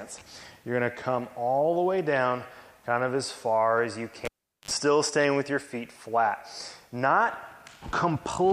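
At 4.25 s the audio is interrupted by a cable pulled and plugged in. A pop is followed by about 408 ms of near silence. Then comes a 56 ms burst of 50 Hz mains buzz as the plug tip touches, and a second pop at 4.71 s when the sound returns.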